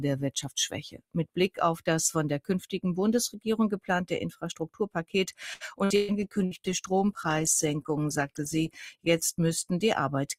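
From 0.9 to 1.58 s, sound cut by the noise suppressor pulls the level down by about 21 dB across roughly a fifth of a second. The audio sinks instead of breaking up, unlike packet loss.

From 5.53 to 6.54 s, repeated packet loss (robotic sound) leaves four gaps, the longest 0.12 s, patched by continuing the last sound. This makes it choppy rather than quietly dimmed.

From 6.24 to 9.99 s, a call bitrate drop makes the sound rough, watery or muffled, which fits a fall from 48 to 16 kbps that bottoms out for about 2.4 s.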